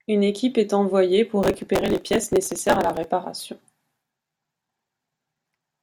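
Right after "équipe est envoyée pour", at 1.43 s, processor overload crackle sets in and runs until 3.04 s. The processor could not finish its audio buffers in time. These were very short buffers, around one and a half milliseconds each. Well over a hundred of them were missed over that stretch. Each missed buffer was simply skipped, leaving a tiny hard-edged gap. Packed together, these gaps make a gritty crackle over the speech. It stops when the load eases.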